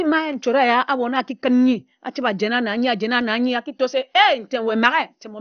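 Speech, and it's dull and gurgly all the way through, with nothing above about 6.5 kHz. That's likely MP2 compression, starved of bits at something like 48 kbps.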